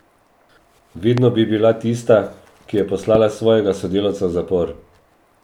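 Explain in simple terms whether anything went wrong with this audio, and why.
A sudden electrical jolt, likely from a plug, switch or static, caused a loud pop at 1.18 s and 3.15 s. The first is louder, and the speech continues underneath both.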